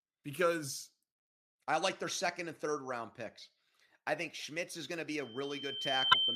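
A speech recording in which, just after "is going to be", a loudspeaker feedback squeal starts at 5.20 s and runs to the end: a steady 3.1 kHz tone swells over roughly a second until it sits around 5 dB above the speech, as the microphone re-amplifies its own loudspeaker. Unlike a fixed whistle, it grows by itself. Inside it, from 6.11 to 6.15 s, damaged data in the compressed stream produces a short glitch as the decoder loses sync.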